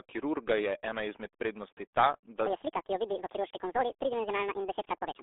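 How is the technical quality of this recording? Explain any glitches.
Poor, with two faults: narrowband codec damage over the whole clip, and a speed error in the second half.

The RealAudio 14.4 codec damage runs throughout. The speech sounds muffled and gargly, squeezed into a telephone-like band of roughly 300 Hz to 3.6 kHz, with nothing above 3.8 kHz. This comes from RealAudio 1's 8 kbit/s coding, which discards the upper band and smears what remains.

A section at the wrong speed runs from 2.46 s to the end at 5.22 s. The speech suddenly turns high and hurried, playing 1.76 times too fast and sitting about ten semitones higher. The likely cause is that portion being played against the wrong clock, which shifts speed and pitch together.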